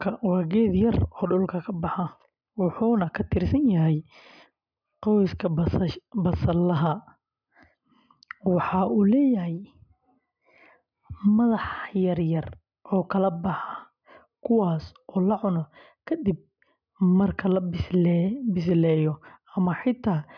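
Nothing in this recording calls for comment, since no technical faults turn up anywhere along the way.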